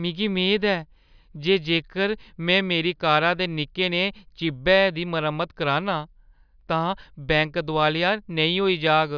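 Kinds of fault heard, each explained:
No technical faults can be heard anywhere in the recording; the signal stays steady and intact throughout.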